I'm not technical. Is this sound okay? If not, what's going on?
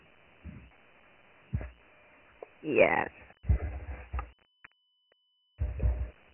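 No. The speech carries Dialogic VOX ADPCM damage from start to finish. This is an old telephone-system format, used for phone menus and voicemail, that keeps only a rough 4-bit step toward each next sample. Here the damage is heavy. Nothing above 3 kHz survives, so the speech sounds dull and boxed-in, and the crude stepping leaves a gritty hiss that rides along with the speech. The limited range points to the slower 6,000-samples-a-second version of the format.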